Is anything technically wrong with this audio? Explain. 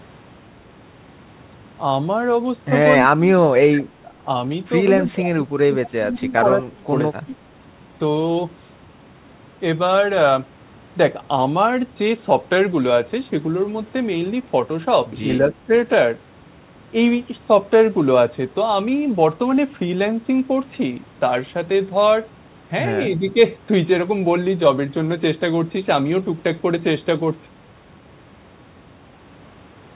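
Yes. Speech is suppressed in double talk at 3.17–4.14 s, 5.0–6.94 s, 7.19–7.37 s, 15.42–15.71 s and 23.18–23.37 s. The talker dips and breaks into pieces, by about 25 dB at first and about 10 dB later. The likely cause is an echo canceller mistaking simultaneous far-end talk for echo and turning everything down. On the waveform the envelope shrinks and chops into fragments. On the spectrogram the energy fades to faint patches under the call path's 4 kHz ceiling.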